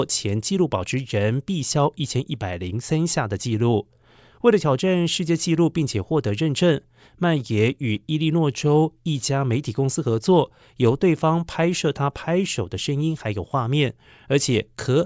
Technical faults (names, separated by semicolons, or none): none